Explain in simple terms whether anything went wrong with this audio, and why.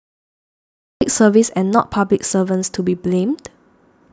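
Something went wrong at the very beginning: a cut-off start. The first 1.01 seconds are dead silence, then the speech bursts in mid-sound with no natural build-up. Unlike a dropout, the gap sits only at the start, because the recording began late.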